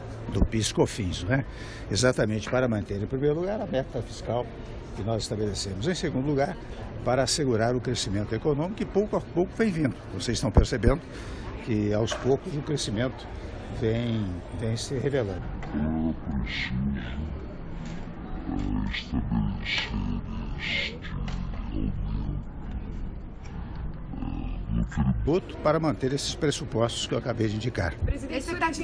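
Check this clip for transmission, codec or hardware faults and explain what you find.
There's one clear fault, a wrong sample rate, from 15.38 to 25.27 s. Across that stretch everything drops a full octave, 12 semitones down, and runs at half speed, so the sound turns slow, heavy and dragged out. Pitch and tempo shift together by the same factor of two, which points to audio captured at 44.1 kHz being clocked out at roughly 22 kHz with no rate conversion in between.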